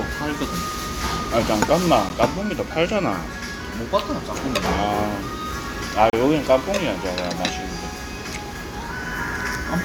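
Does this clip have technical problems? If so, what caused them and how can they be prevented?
Yes. The sound briefly drops out twice: a very short hole of about 12 ms at 2.09 s, and a longer one of about 32 ms from 6.10 to 6.13 s. Each has smeared edges, and the sound resumes where it left off. These are gaps at joins of encoded pieces. The audio was encoded in separate chunks about 4 s long and joined untrimmed, so each chunk's encoder start-up delay and final-frame padding remain as silence. To prevent this, encode the material as one continuous stream, or trim each piece's encoder delay and padding using gapless metadata before joining.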